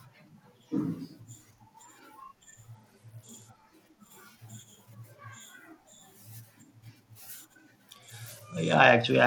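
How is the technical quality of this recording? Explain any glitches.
The recording has two Bluetooth SBC bit pool drops, at 2.75–3.62 s and 7.94 s to the end. A congested link starved the encoder, consistent with a fall from bit pool 28 to about 11, near 90 kbps. The speech turns dull and gritty.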